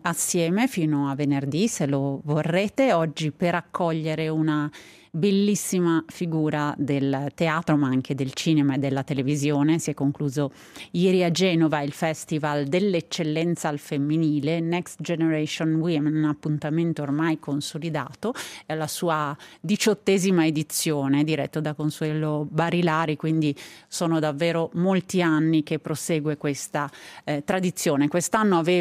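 No audible technical faults detected.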